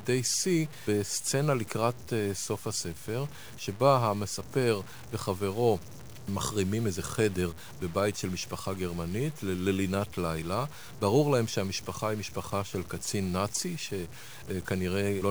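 Speech runs through the whole clip with a grainy, rasping distortion that tracks the sound, roughest on quiet syllables and in pauses, where low-level detail sputters or collapses to silence. The likely cause is low bit depth without dither: the audio seems truncated to about 7 bits, leaving error only about 20 dB below the signal. A waveform zoom shows visible stair-steps, and the spectrogram shows broadband hash that rises and falls with the speech energy.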